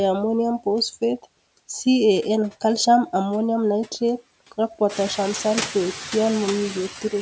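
Throughout the speech, the background noise sinks away between phrases and swells back under them, by about 16 dB. These noise suppressor artifacts come from a suppressor cutting, frame by frame, each band it judges to be steady noise. The room noise steps up by about 12 dB at roughly 5 s.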